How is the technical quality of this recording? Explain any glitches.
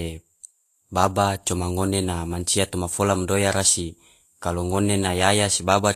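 The quality is compromised by audible lossy compression across the whole speech recording. Vorbis compression runs throughout. Nothing sounds above 14.2 kHz. The treble is hissy and grainy, and consonant attacks blur. The cause is likely a low-quality Vorbis encode, around 37 kbps. It quantises treble detail into noise.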